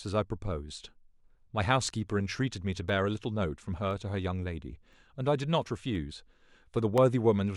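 From 1.87 s to 6.98 s, periodic USB or driver dropouts blank roughly a millisecond of speech every 1.024 s, heard as evenly spaced ticks.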